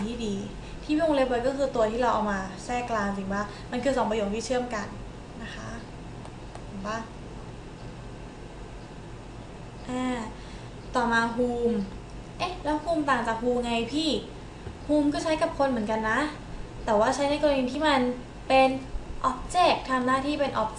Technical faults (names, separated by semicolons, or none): none